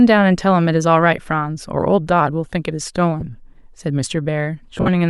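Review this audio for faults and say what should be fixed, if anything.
Lost LE Audio frames break up the speech three times: a single dropout at 1.17 s lasting 10 ms, another from 3.20 to 3.22 s lasting 20 ms, and a cluster from 4.78 to 4.89 s where 70 ms is lost across about 100 ms, the longest run around 50 ms. The gap lengths fit 10 ms LC3 frames. For each missing frame the decoder repeats the last spectrum with randomised phase signs, so voiced harmonics blur into a brief noisy smear. In the longer run that smear fades towards silence. On a spectrogram the harmonic lines give way to diffuse vertical bands that dim across the 4.8 s cluster. On the waveform the envelope flattens into noise-like texture there. Improving link margin, for example by shortening the range, reducing 2.4 GHz interference or allowing more retransmissions, would prevent these losses.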